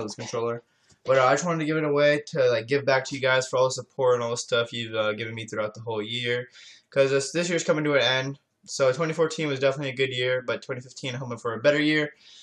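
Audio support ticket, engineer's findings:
No audible technical defects found on review; signal path behaves as expected with no action required.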